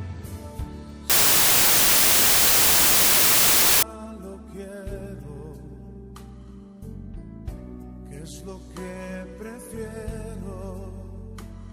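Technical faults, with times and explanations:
1.10–3.83 s, wrong sample width: loud harsh noise with the real sound buried underneath, running 1.33 times fast, which fits packed 24-bit data being read as 32-bit.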